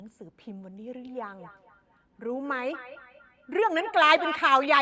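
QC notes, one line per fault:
0.94–4.45 s, feedback echo between two devices: each stretch of speech returns at a steady interval of about a fifth of a second, growing thinner and more ringing with each pass. The loudest repeats sit about 17 dB below the direct speech. A second device in the same room is replaying this microphone's signal, and the microphone picks it up again. Its own echo canceller cannot remove sound from another device. Unlike room reverberation, the repeats are discrete and evenly spaced, not a smooth decaying tail.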